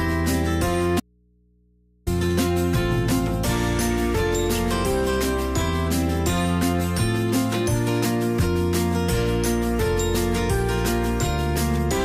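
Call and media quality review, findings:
Audio dropout to a faint residue, 1.00–2.07 s: sound cuts abruptly for about 1.07 s, leaving only mains hum far below normal level, then returns mid-flow. Likely upstream signal loss with the downstream input still live, picking up hum.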